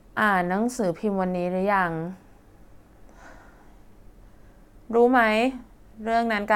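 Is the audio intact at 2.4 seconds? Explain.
Yes, the speech at 2.4 s is intact, with no audible dropout, click, distortion or other fault at that moment.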